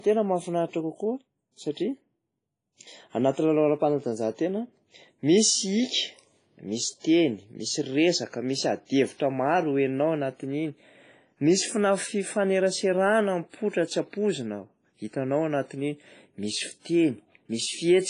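Right from the start the speech has that ringing, washy quality with a hiss that swells and fades along with the voice, and nothing at all above 10.3 kHz. That's classic heavy transform-codec damage, most likely WMA compression at a low rate, something around 24 kbps. The encoder is throwing away weak spectral lines and spreading its quantisation noise across long blocks, so the noise floor breathes with the signal instead of staying put.

That same long-block behaviour shows up as pre-echo twice, at 1.72 s and again at 16.80 s. Each time a sharp attack lands late in a block, and the noise the encoder budgeted for the loud part smears back into the quiet just before it. You get a short hiss running about 50 ms ahead of the onset, and the attack itself comes out softened and blurry rather than crisp.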